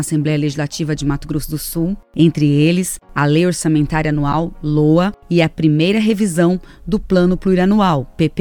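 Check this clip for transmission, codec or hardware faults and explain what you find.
One fault: damaged data in a compressed stream at 4.32 to 4.34 s. Corrupted bytes make the decoder misread frames, lose sync and hunt for the next header, giving a brief disruption.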